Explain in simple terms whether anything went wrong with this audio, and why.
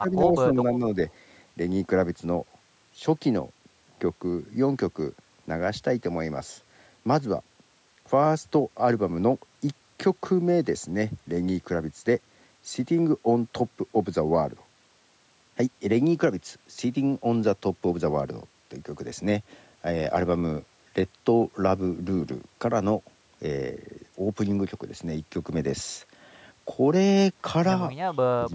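From 0 to 0.37 s and 0.53 to 0.84 s, and again from 28.32 s to the end, the voice dips, sharply at the start and end, only slightly in between. This is speech suppressed in double talk, likely an echo canceller turning the talker down while the other side spoke. It differs from a dropout because the sound sinks rather than falling into silence.

Between 1.09 and 1.14 s, a very faint scrap of the voice comes back about 0.28 s late. This is an echo leak, likely loudspeaker sound that slipped past the canceller and was sent back. Unlike the dips, it adds a delayed copy instead of taking sound away.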